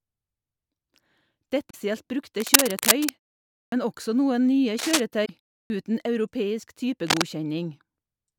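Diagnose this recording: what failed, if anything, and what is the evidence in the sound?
At the codec stage, damaged data in the compressed stream produces two brief disruptions, from 1.69 to 1.75 s and from 5.22 to 5.30 s, each lasting roughly 50 to 80 ms. In these short stretches the decoder is handed corrupted frames. It misreads or refuses them, loses frame sync and resumes at the next valid header.

In the analogue wiring, cable scratch noise appears three times. The longest burst runs from 2.40 to 3.11 s and sits a little above the speech. Two shorter bursts, at 4.78 to 5.00 s and 7.04 to 7.23 s, are about level with the speech. Each is a dense, uneven rustle laid over the signal. The likely cause is a worn cable, connector or control being disturbed, with its contact resistance fluctuating rapidly while it moves.

At the playback device, there are two cases of a clipped start after a pause. 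Speech resumes at 3.67 s after a 0.56 s gap, and about 52 ms of its onset is missing. Speech resumes again at 5.65 s after a 0.33 s gap, with about 50 ms lost. The output path takes roughly 50 ms to wake or relock after each silence, so the opening sounds are swallowed and the speech starts abruptly.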